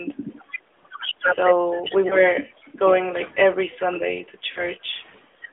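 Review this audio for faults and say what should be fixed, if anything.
The whole speech clip passes through the AMR narrowband mobile codec. Nothing above about 3.5 kHz or below 300 Hz survives, and the plainly audible buzzy, synthetic edge fits a mid-rate mode around 10 kbps, where the few excitation pulses per subframe can't fully rebuild the voice. Unlike a plain telephone bandpass filter, which only narrows the band, this adds that coded roughness. Prevention: carry the call over a wideband or higher-rate codec end to end.

There are lost AMR speech frames at 2.08 to 2.16 s and at 4.52 to 4.67 s. The first is a brief dip or warble that fits a single 20 ms frame. The second lasts longer, about what two frames would give: the voice smears and sags as the decoder repeats its last pitch and vocal-tract settings at falling gain, then returns weakly. Unlike a hard dropout, the sound stretches and fades instead of cutting to silence. 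Prevention: improve radio conditions or add error protection on the link.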